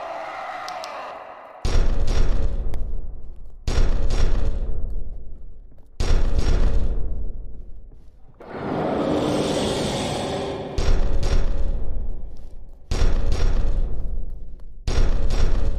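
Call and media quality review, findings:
Tick at 2.74 s; block of digital silence, 0.73 ms, fitting a 32-sample block, from an unfilled output buffer or invalid calculated values, audio dropping and resuming without fade.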